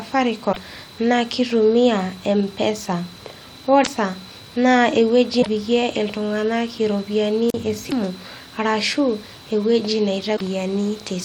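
Damaged data in the compressed stream causes short glitches at 0.49–0.57, 3.81–3.87 and 5.39–5.47 s, the last just before "iltung'anak iropiyiani". The decoder misreads corrupt frames and loses sync. At 7.49–7.54 s, after "iltung'anak iropiyiani", a wireless microphone squelch dropout brings a hiss rise and then a hole of about 39 ms. The faded radio signal muted the receiver. More corruption blips follow at 7.86–7.93 and 10.33–10.41 s.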